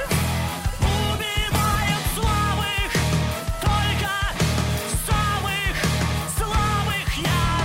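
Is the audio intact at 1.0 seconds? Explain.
No. At 1.0 s the audio is inside a call bitrate drop running from 0.89 to 2.03 s. The encoder's bit budget collapses, consistent with a fall from about 128 to 13 kbps, so coding coarsens and highs are cut, leaving the sound rough and muffled.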